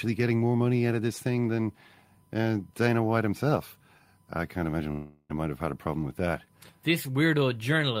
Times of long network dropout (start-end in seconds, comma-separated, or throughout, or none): 4.91-5.31